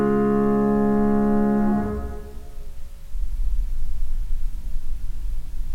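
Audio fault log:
The music signal shows no technical faults anywhere in the clip.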